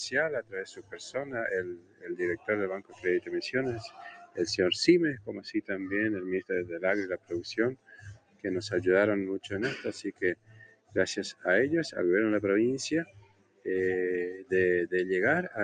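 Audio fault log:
Throughout: noise suppressor applied to music or sounds. A speech-tuned suppressor stayed on and treated steady tones and tails as noise, so the level pumps, swinging by around 20 dB.
0.41–1.0 s, 1.62–2.16 s, 2.78–3.33 s, 3.88–4.38 s, 7.75–8.45 s, 10.09–10.96 s, 13.05–13.66 s: sound cut by the noise suppressor. In each span, held or fading sound was misjudged as noise and pushed down about 15 to 18 dB for roughly 0.4 to 0.7 s while attacks passed, leaving thin dips.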